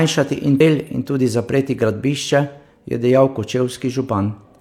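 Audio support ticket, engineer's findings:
Damaged data in the compressed stream, 0.56–0.61 s: corrupt frames misread, decoder loses sync and hunts for the next header. Heard as a brief 50 ms disruption in the speech.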